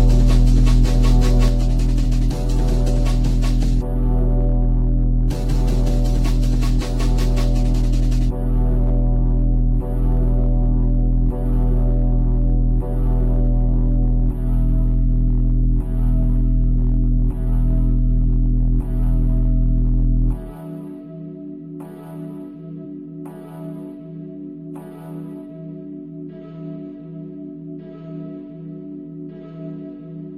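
Up to 1.48 s, a doubled audio track: a dry copy trails around 400 ms behind, about 5 dB down, likely from a slower second capture, and it drops out abruptly.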